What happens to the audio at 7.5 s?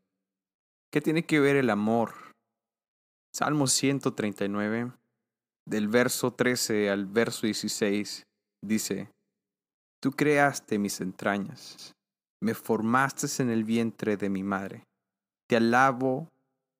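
Nothing goes wrong at 7.5 s; the speech there plays through intact, with no dropout, click, distortion or other fault.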